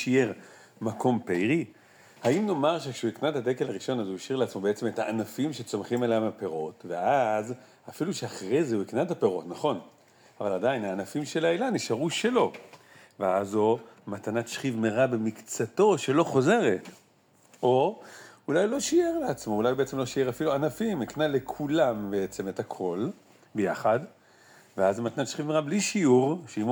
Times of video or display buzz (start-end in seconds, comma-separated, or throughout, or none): 18.74-22.50